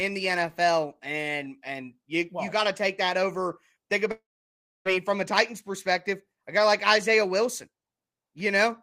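A long network dropout runs from 4.11 s to 4.87 s. The speech breaks off, and the last sound is stretched into a short buzzing tail that fades, leaving about 0.62 s of silence before the speech resumes at 4.87 s. Roughly 0.74 s of the speech never plays. This is likely a network dropout: the packets stopped arriving, the receiver covered the gap by extending what it last had, and then fell quiet until the stream returned.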